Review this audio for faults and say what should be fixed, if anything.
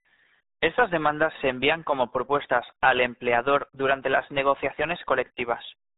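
RealAudio 14.4 codec damage runs through the whole speech clip. Nothing above 3.8 kHz survives, and the heavy coding leaves the speech muffled and gargly, the sound of a modem-era speech codec squeezing everything into what points to roughly 8 kbit/s. To prevent it, re-encode from the original recording with a modern wideband codec at an adequate bitrate.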